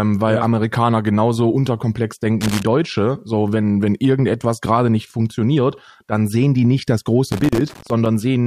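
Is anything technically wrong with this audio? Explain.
Yes. Loose connector crackle appears at 2.41–2.63 s and again at 7.32–8.06 s. A worn contact intermittently breaks the speech signal, chopping it, heard as irregular scratching. The waveform shows jagged dropouts and spikes, and the spectrogram shows broadband vertical streaks.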